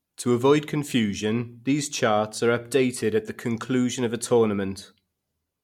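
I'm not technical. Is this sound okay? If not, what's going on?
Yes, no technical faults are audible anywhere in this clip.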